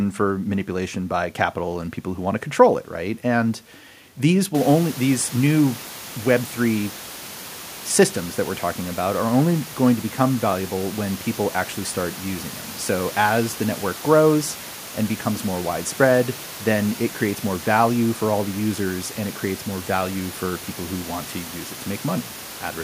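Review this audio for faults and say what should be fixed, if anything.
Nothing here needs fixing; no faults were heard.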